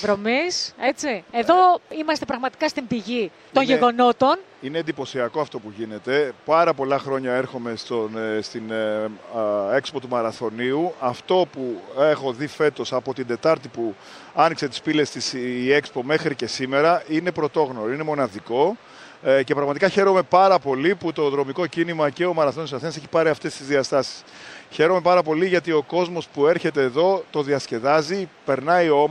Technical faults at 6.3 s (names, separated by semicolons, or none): none